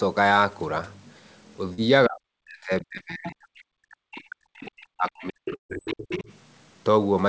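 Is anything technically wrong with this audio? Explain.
Yes, the speech has several transmission and echo-control faults.

Short concealed packet loss occurs at 1.74 to 1.80 s and 2.98 to 3.01 s. Roughly 40 ms and then 20 ms of audio arrived too late, so the receiver extended the preceding sound and blended back in. Each gap is heard as a brief smear or wobble.

Speech suppressed in double talk spans 2.07 to 3.53 s and 3.82 to 6.28 s. The echo canceller likely mistook the talker for loudspeaker echo while both sides spoke, and it pulled the level down, at worst by around 40 dB. The voice dips, dulls and drops out in pieces.

The other side's voice leaking through appears at 3.27 to 3.33 s, 4.14 to 4.31 s, 4.57 to 4.72 s, 5.09 to 5.28 s and 6.11 to 6.23 s. Echo cancellation likely left loudspeaker pickup in the microphone signal, so fragments of a second voice surface roughly 15 to 25 dB below the talker.

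A burst of packet loss runs from 5.55 to 5.71 s, removing about 140 ms. Concealment stretched the last sound and faded it, leaving about 110 ms of near-silence before the audio resumes further along, with that stretch missing.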